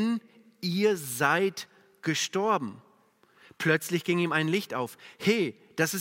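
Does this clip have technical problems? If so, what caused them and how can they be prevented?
No technical faults are audible.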